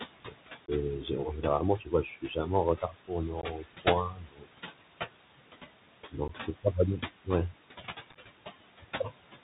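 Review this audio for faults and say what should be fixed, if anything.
Noise suppressor artifacts run through the whole clip. The suppressor pulls the room noise down by about 17 dB between phrases. The leftover noise pumps, sinking between words and rising under them. Fix: gentler suppression settings, or a quieter microphone position.

Speech cut by the noise suppressor appears at 0.03–0.35, 1.01–1.44, 1.78–2.49, 2.82–3.12, 3.28–3.87, 4.09–4.48, 6.12–6.66 and 8.81–9.12 s. Soft sounds get mistaken for noise and ducked, by up to about 22 dB. They sound swallowed. Fix: a less aggressive suppressor that protects low-level speech.

The Bluetooth CVSD headset codec is heard throughout. Nothing above 4 kHz survives. S sounds are scratchy, loud high parts distort, and a granular hiss sits under the speech, which fits a 64 kbit/s CVSD link. Fix: a wideband headset mode such as mSBC or LC3.

Unconcealed Bluetooth headset packet loss occurs at 0.66–0.70, 3.41–3.44 and 6.28–6.30 s. 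These are holes of 15 to 23 ms with hard, abrupt edges. At 8.11–8.17 s, scattered losses crackle, with the longest gap 11 ms. Fix: a stronger radio link plus packet loss concealment in the receiver.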